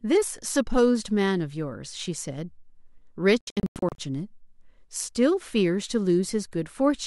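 A digital broadcast dropout hits from 3.41 to 3.99 s: the receiver stopped getting usable frames and muted, leaving several short holes scattered over about 0.58 s, the longest 96 ms, with roughly 352 ms of speech simply missing before normal reception resumes.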